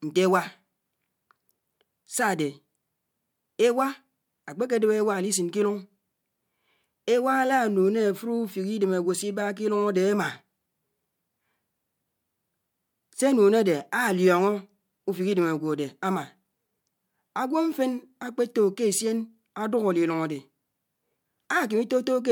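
A speech recording with nothing technically wrong with it.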